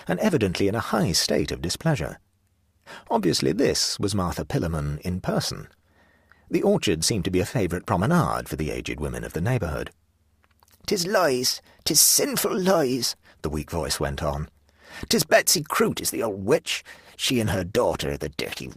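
At 15.87 s the speech abruptly drops in quality and stays degraded until the end at 18.76 s. This is an adaptive stream switching to a lower bitrate: the player changed to a cheaper encoding, most plausibly because the connection slowed. The change is sudden but leaves no gap. Codec artefacts become more prominent. That sound fits a step down from roughly 64 kbit/s Opus to about 16 kbit/s.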